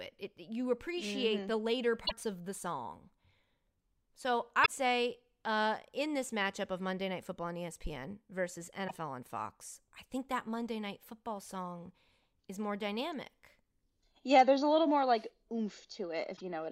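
Damaged data in the compressed stream of this speech recording throws the decoder out of sync, producing short glitches at 2.03–2.12 s, 4.62–4.68 s, 8.85–8.91 s and 16.33–16.41 s.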